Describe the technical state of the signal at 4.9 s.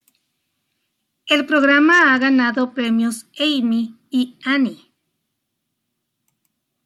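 At 4.9 s the speech signal is intact, with no audible technical fault at that moment.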